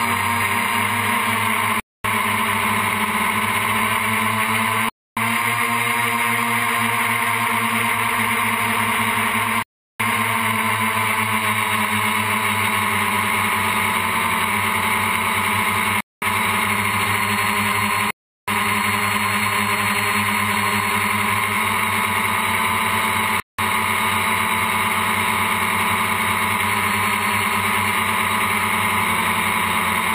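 At 1.80–2.04 s, 4.89–5.17 s, 9.63–10.00 s, 16.01–16.22 s, 18.11–18.48 s and 23.40–23.59 s the audio drops into a block of digital silence lasting 0.19 to 0.37 s, cutting out and back without a fade. Because the gaps are silence rather than a quiet patch or smoothed-over filler, they sound like dead holes. The longer gaps fit 16384-sample blocks left unfilled.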